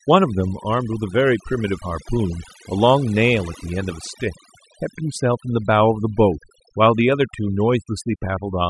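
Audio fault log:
Throughout: overdone noise removal. A noise reduction stage was pushed too hard on noisy speech. It turns individual frequency bands far down or off whenever they sit near its noise estimate. Quiet parts of the voice vanish with them. The background drops and breaks up into twinkling specks.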